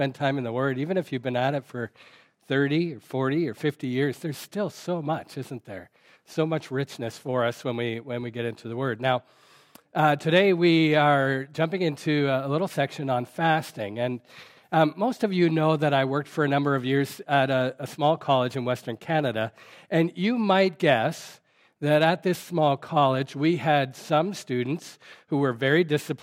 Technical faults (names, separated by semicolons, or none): none